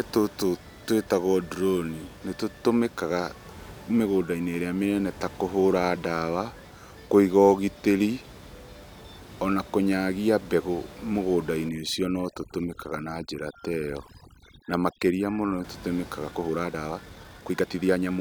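Speech, recorded with room noise sitting about 21 dB below the voice, carries two faults in its second half. From 11.69 to 15.64 s there is overdone noise removal: a noise reducer set far too aggressively pulls individual frequency bands down or out whenever they come close to its noise estimate. That room noise collapses into near silence with twinkling specks, and the voice's quieter components are stripped along with it. On a spectrogram the background becomes dark and scattered with isolated bright dots, and the harmonics look patchy and broken. From 16.29 s to the end the speech suddenly runs about 1.55 times faster at unchanged pitch, sounding rushed. The likely cause is time-stretching software squeezing the section by dropping short pieces and splicing the rest together. The waveform shows syllables packed more tightly, and the spectrogram shows compressed segments with small discontinuities at the joins.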